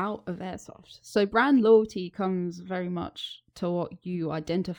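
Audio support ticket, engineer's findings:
No audible faults found.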